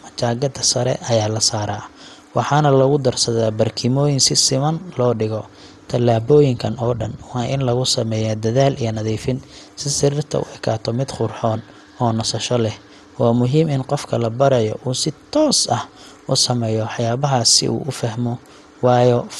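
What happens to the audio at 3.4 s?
At 3.4 s the speech carries MP2 compression damage, and it runs through the whole clip rather than starting there. The sound is dull, with a gurgling, granular edge on the speech. Nothing is heard above about 12.2 kHz. The likely cause is MPEG Layer II coding at a rate too low for the material, which fits roughly 64 kbps. Short of bits, the coder shuts off whole upper sub-bands, so bands flicker on and off. The bands that survive are coarsely quantised.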